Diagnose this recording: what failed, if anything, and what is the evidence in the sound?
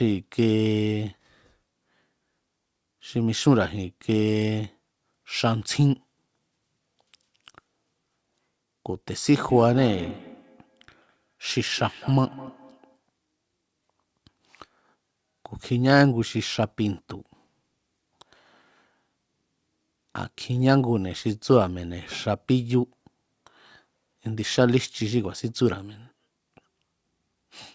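Feedback echo between two devices, 9.45 to 13.01 s, at the call-processing stage. Each phrase in the speech returns about a fifth of a second later, thinner and ringier, at about 17 dB below the speech, and the repeats keep coming for those few seconds. A second device in the room is playing the call aloud, and this microphone picks it up again. The echo canceller only removes its own device's playback, so the loop survives.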